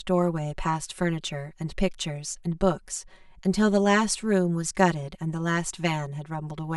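Channel delay (comb filtering) runs through the whole speech clip: one channel arrives roughly 5 ms behind the other, and summing them to mono cancels shared content at regularly spaced frequencies starting near 100 Hz, giving the voice a hollow, phasey quality.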